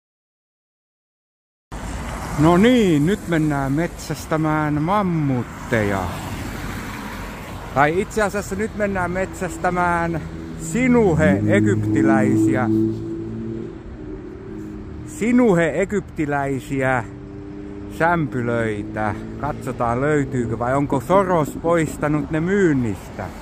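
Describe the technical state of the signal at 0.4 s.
At 0.4 s there is nothing but dead digital silence, with no room tone or noise floor. That silence runs from the start to 1.72 s, where the audio appears abruptly partway through a sound, with no natural attack or fade-in. This is a cut-off start: capture or streaming began late, so the opening of the material was never recorded and the first moment of real signal lands mid-sound after a stretch of empty samples.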